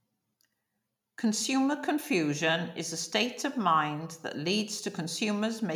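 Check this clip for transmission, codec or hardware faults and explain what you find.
Nothing in the speech points to a transmission, codec or hardware fault.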